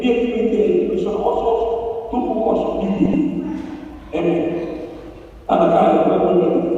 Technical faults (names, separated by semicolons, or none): frames out of order